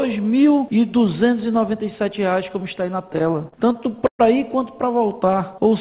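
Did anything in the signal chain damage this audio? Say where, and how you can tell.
Yes. The damage is at the network and jitter-buffer stage of a call path. From 3.08 to 4.22 s there are repeated stalls, a stutter. Sixteen short gaps break the flow. The receiver filled them by extending the last sound, 309 ms in all, about 27% of that span. The longest fill lasts 121 ms and fades. Nothing is lost. Packets simply arrived late, so the buffer kept running dry and the audio drags.

A jitter buffer slow-down follows from 4.91 to 5.70 s. The pitch stays put, but the sound runs at 92% speed, with 68 ms added. Sounds are drawn out. The buffer was low or had just raised its target delay, so it repeated single pitch periods to rebuild its reserve. The whole clip stops at 4 kHz, which fits a G.711 mu-law call codec at 64 kbps.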